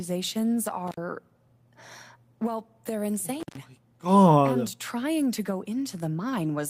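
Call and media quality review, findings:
Intermittent contact: two dropouts with edge crackle, 0.87–0.97 s (about 62 ms open) and 3.40–3.58 s (about 125 ms open). Loose cable or plug briefly breaking the signal path.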